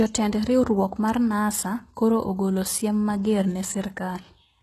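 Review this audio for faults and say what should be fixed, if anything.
The speech throughout carries the heavy, gritty treble of HE-AAC compression, likely from a very low-bitrate stream, which fits something near 16 kbps. Upper bands are rebuilt by spectral band replication from copied lower bands, so sibilants sound lispy and metallic. A spectrogram shows smeared, blocky treble that cuts off completely above 12.3 kHz. Encoding at a higher bitrate, or with plain AAC instead of HE-AAC, would avoid this.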